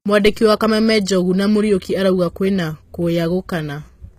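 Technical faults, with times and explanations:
Throughout, HE-AAC compression: the encoder likely coded only the lower spectrum and rebuilt the treble by copying lower bands upward, which fits a bitrate near 20 kbps. The mismatched upper harmonics make the speech's s sounds gritty and lispy, with nothing above 14.9 kHz.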